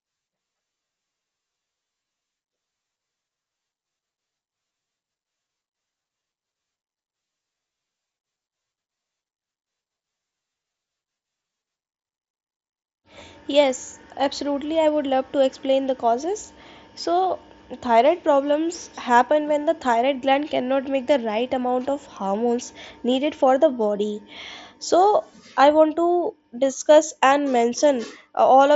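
No faults: the speech arrives over a wideband Bluetooth mSBC headset link, its band stopping near 7.7 kHz as that codec's 16 kHz sampling dictates.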